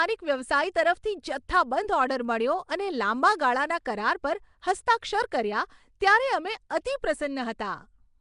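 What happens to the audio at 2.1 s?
At 2.1 s the speech carries the same damage heard through the whole clip. Nothing is present above 10.6 kHz. The voice has a rough, hissy halo and a smeared, underwater quality. This is likely Nellymoser compression, the old Flash microphone codec. It codes short blocks with a fixed, small bit budget. Weak bands get no bits and are filled with noise, which causes the hiss and smearing. The damage fits a rate of around 44 kbps.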